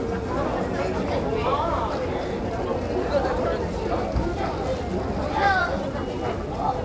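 At 1.90 to 1.92 s there's a skip ahead: close to half a second of the sound is gone, and playback jumps straight to later audio with no gap filling the join. Then from 2.49 to 2.81 s a jitter buffer speed-up trims about 70 ms by snipping tiny pitch-period chunks, so things run at 115% speed at the same pitch and feel hurried. Throughout, nothing above 8 kHz, which fits a G.722 call path.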